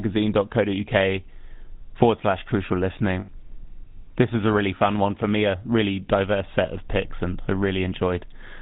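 Speech carried over the GSM full-rate codec, whose pulse-driven vocal-tract model keeps only part of the excitation and discards everything above 4 kHz. The damage is plainly audible as a dull, buzzy, gravelly roughness throughout, consistent with a 13 kbps full-rate channel. At 3.2 to 3.29 s, just after "forward slash crucial", lost GSM frames were concealed by repeating the last good frame. This produces a brief rough, metallic ring of about 80 ms, which fits four lost 20 ms frames.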